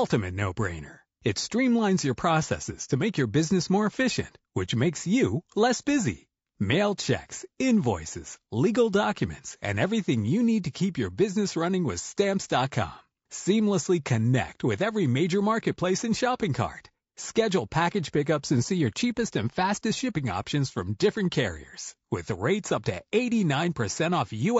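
From start to finish the speech sounds rough and grainy, with noise filling the gaps between harmonics and a thin, synthetic-sounding top band. This is likely low-delay AAC compression (AAC-ELD), whose short frames resolve pitch poorly, and it fits a rate around 32 kbps.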